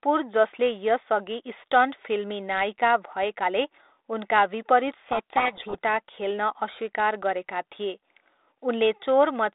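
From 5.04 to 5.82 s, just after "भएकाले उनका विपरीत", the speech drowns in harsh, grinding distortion. This is a codec payload misread: the 32 kbit/s G.726 code words arrive in a different bit order than the decoder expects, so the adaptive difference values are decoded wrongly.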